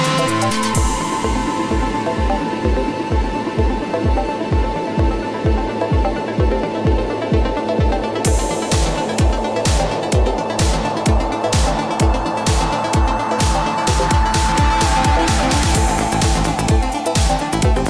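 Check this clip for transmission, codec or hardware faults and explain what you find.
Nothing in the clip points to a fault.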